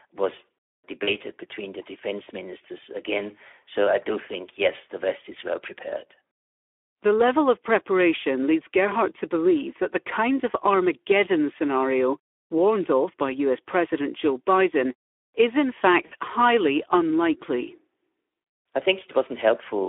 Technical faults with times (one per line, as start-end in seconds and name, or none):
0.00-19.88 Speex codec
1.03-1.12 VoIP packet loss concealed by the speech codec
16.05-16.12 VoIP packet loss concealed by the speech codec